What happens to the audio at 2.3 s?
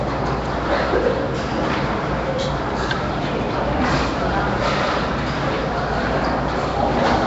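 At 2.3 s the audio carries the same damage heard throughout: a rough, hissy halo and a smeared, underwater quality, with nothing above 7.7 kHz. This is likely Nellymoser compression, where fixed coarse bit allocation starves weak bands and fills them with noise, consistent with a low bitrate around 32 kbps.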